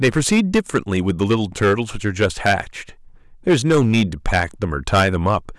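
Speech with hard clipping throughout: the level is driven about 11 dB past full scale, so a few percent of samples are flattened, adding harmonics far up the spectrum on the loud peaks.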